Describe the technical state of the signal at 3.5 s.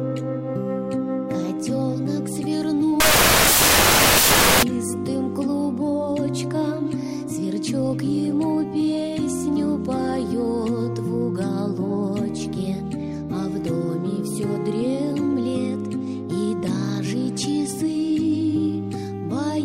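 At 3.5 s the reader is assembling each sample from the wrong bytes, whether shifted by one byte, swapped in order or read on the wrong alignment, so the rapidly fluctuating low-order bits end up as the most significant part of every value. The result is samples built from the wrong bytes, heard from 3.00 to 4.63 s as loud, harsh broadband noise, close to white on louder sounds.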